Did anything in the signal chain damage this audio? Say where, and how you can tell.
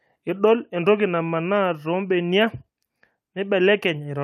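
No, nothing in the chain did.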